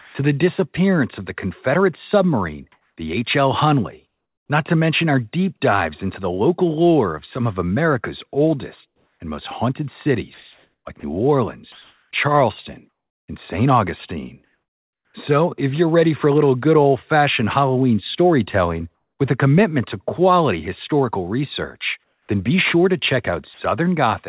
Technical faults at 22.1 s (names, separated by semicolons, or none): comfort noise in place of the background